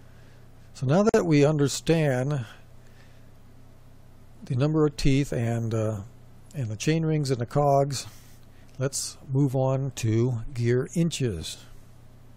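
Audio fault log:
1.09–1.14 s, gap at a join of encoded pieces: the sound drops out for about 47 ms, with edges smeared by the codec, then resumes exactly where it broke off. The audio was encoded as separate pieces and joined without trimming, so the encoder's start-up delay and the padding of the previous piece's final frame both remain as a short stretch of silence.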